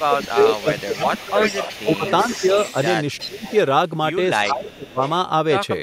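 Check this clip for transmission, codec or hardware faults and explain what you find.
Two echo-control faults run through the speech. Speech suppressed in double talk at 0.0–1.38, 1.76–2.05, 3.26–3.46 and 4.47–4.99 s: the voice dips by up to about 20 dB, likely because the echo canceller ducked the talker while both sides spoke. Echo leak at 0.0–3.53, 4.45–4.52 and 4.69–5.1 s: a copy arrives 374 ms late, about 15 to 25 dB down, likely residual loudspeaker echo the far end's canceller failed to remove.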